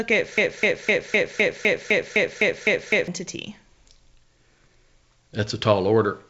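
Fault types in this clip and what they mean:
Broken-record loop: a 0.25 s slice repeats identically eleven times from 0.38 to 3.08 s, likely from a stalled stream. Unlike echo, no fresh sound continues underneath.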